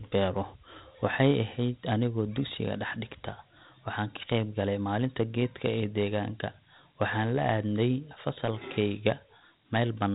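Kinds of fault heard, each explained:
Dialogic VOX ADPCM: the speech has been squeezed through the Dialogic (OKI) ADPCM scheme used for telephone prompts and voicemail, which keeps only a 4-bit step per sample and predicts the rest. At the rate this clip implies, about 32 kbps, the damage is plainly audible: a gritty, grainy hiss rides along with the voice throughout, and nothing is left above 3.8 kHz, giving the narrow, boxed-in telephone sound.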